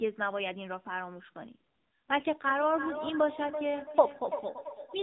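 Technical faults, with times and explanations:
Throughout, AMR narrowband mobile codec: the speech is cut off above 4 kHz and sounds buzzy and synthetic. The low bitrate, which fits about 7.4 kbps, leaves little detail.
2.45 to 5.03 s, feedback echo between two devices: the speech returns roughly every 300 ms, thinner and ringing, at about 9 dB below the speech. A second device replays the first microphone's audio, and that microphone picks it up again.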